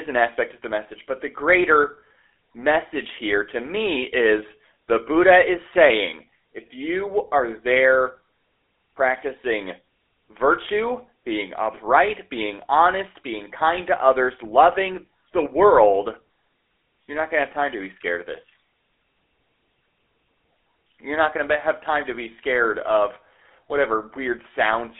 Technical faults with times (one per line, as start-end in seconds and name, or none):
0.00-25.00 GSM full-rate codec